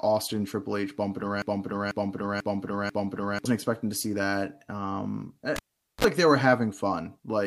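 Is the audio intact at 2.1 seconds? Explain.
No. At 2.1 seconds the speech sits inside a broken-record loop running from 1.42 to 3.45 s. A 491 ms fragment plays four times back to back, most likely because the playback or stream stalled and kept resending the last piece it held. The missing speech never returns; normal audio resumes with "expecting to see that". Unlike an echo, each repeat is identical and undecayed, and unlike a dropout, nothing goes silent.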